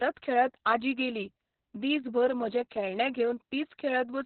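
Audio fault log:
throughout: Opus voice compression, heavy; narrowband SILK coding at a low rate, which fits roughly 6 kbps, leaves nothing above 4.2 kHz and coarse excitation, so speech sounds muffled, hoarse and robotic.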